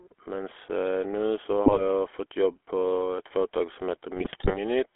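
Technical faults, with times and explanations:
Throughout: GSM full-rate codec. The speech has a constant buzzy, gravelly roughness, and the top end is missing, with the band running only from about 300 Hz to 3.4 kHz. The codec rebuilds the voice from a vocal-tract filter fed by a sparse, regularly spaced pulse train rather than the true excitation. That coarse source is what gives the grainy, rasping texture. The damage is plainly audible, and it fits the old 13 kbps full-rate coder.
1.66–1.81 s and 4.16–4.58 s: GSM bit errors. In these two stretches the voice breaks into squawks, pops and a gargling smear. The second stretch is longer and worse. Corrupted bits reached the decoder, so for the hit frames the filter, pitch and gain values it used were wrong. That bends the spectrum and throws the level around from frame to frame. The lengths suggest roughly 7 damaged frames in the first burst and 17 in the second, consistent with an error rate near 2 to 3 percent.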